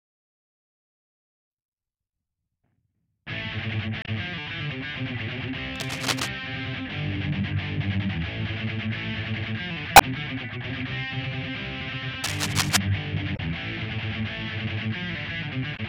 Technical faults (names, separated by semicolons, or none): damaged data in a compressed stream; cable scratch noise